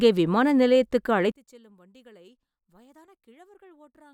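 One channel inverted, from 1.32 s to the end, just after "விமான நிலையத்துக்கு": the speech collapses by about 31 dB when the stereo pair is heard in mono, leaving only a faint residue of the voice. The likely cause is reversed polarity on one channel, so the centred voice, identical in both sides, cancels on summing, and only the small difference between left and right survives.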